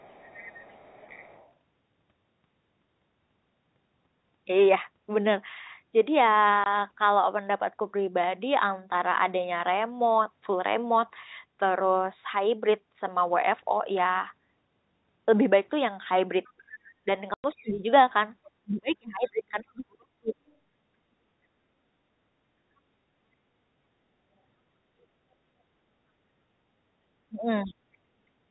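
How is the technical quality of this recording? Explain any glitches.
The recording is a speech call with three recurring faults: leakage of the far-end voice, two silent dropouts, and passages where the talker is pushed down during overlapping talk. The telephone band, limited by G.711 A-law coding, is heard working as expected.

Other side's voice leaking through occurs from 0.00 to 1.49 s and in brief scraps at 16.44–16.50, 18.44–18.51, 19.76–19.82 and 27.67–27.73 s. It is likely residual echo the canceller failed to remove. It sits faintly underneath, at about 25 to 35 dB below the talker.

Packet loss filled with silence hits at 6.64–6.66 s (20 ms) and 17.34–17.44 s (100 ms, which fits five 20 ms packets going missing). The receiver inserted digital silence in place of the lost audio, so the speech drops out abruptly.

Speech suppressed in double talk appears at 17.55–17.88 s (about 20 dB down), 18.62–20.34 s (up to about 40 dB) and 27.29–27.74 s (about 25 dB). 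The echo canceller likely mistook overlapping speech for echo and attenuated the talker, who dips and partly vanishes.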